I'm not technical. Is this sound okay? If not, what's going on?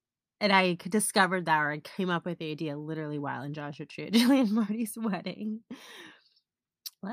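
Yes, nothing stood out as a problem when listening to this recording.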